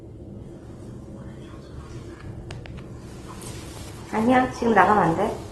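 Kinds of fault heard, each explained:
Opus compression: The sound is grainy and rough, with tones turned noisy rather than swirling. Nothing reaches above about 12.1 kHz. This likely comes from Opus in its music mode, at a low rate that fits around 16 kbps, filling starved bands with noise.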